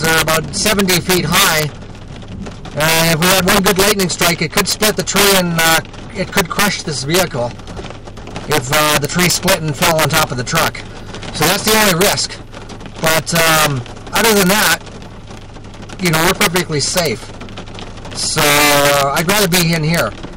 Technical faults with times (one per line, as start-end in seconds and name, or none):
0.00-20.37 integer overflow